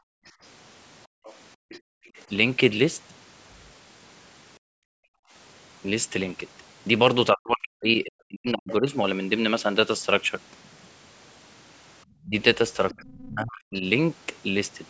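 Right from the start, 0.00 to 2.12 s, the room background gets gated by the echo canceller: while the loudspeaker plays, it clamps the mic by as much as about 40 dB, so the ambience drops out for roughly a second in total. The same thing happens again from 4.59 to 5.33 s.

Between 1.24 and 2.22 s, a faint second voice sits well under the talker. That's the other side's voice leaking through, likely far-end audio from the loudspeaker that the canceller didn't fully scrub. There's a brief, louder scrap at 8.69 to 8.74 s and another quiet stretch from 12.22 to 13.28 s.

From 7.33 to 8.89 s, and again from 12.25 to 13.83 s, the talker's own speech dips deeply and breaks up. This is speech suppressed in double talk, likely the canceller turning everything down while both sides spoke at once.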